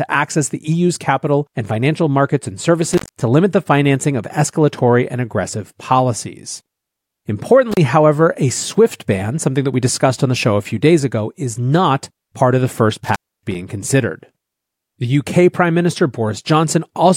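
At 2.92–3.22 s, after "and financial markets and", at 7.72–7.77 s, before "however a swift ban", and at 13.04–13.55 s, after "part of the first", an intermittent contact breaks the signal for 187, 33 and 273 ms. Crackle at each edge and faint hiss during the gap set it apart from a clean digital dropout.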